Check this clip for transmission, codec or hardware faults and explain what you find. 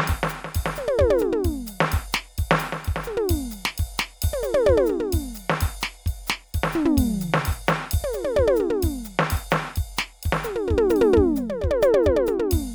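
The music shows no faults of any kind.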